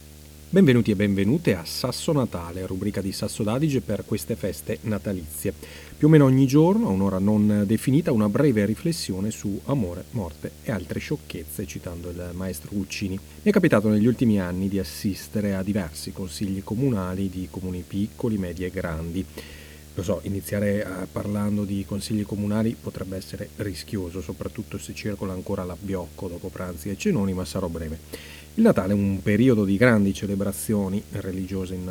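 Video or display buzz runs under the speech from start to finish. A screen or its video cable is coupling electrical interference into the audio path. The buzz sits at 75 Hz, the field rate of the picture, so it repeats with each refresh of the display. Hash rides above it as a gritty layer of higher frequencies. The buzz stays roughly 20 dB below the speech throughout.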